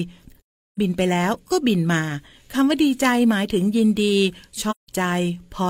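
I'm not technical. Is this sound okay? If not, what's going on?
No. AAC frame loss with muting: chunks of compressed audio went missing and were replaced with silence, so the speech fades into soft-edged gaps at 0.39–0.79 s and 4.70–4.89 s.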